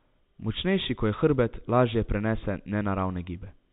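No faults are audible in the speech; it arrives over a G.711 mu-law call path at 64 kbps with nothing above 4 kHz, which is that codec's normal band limit.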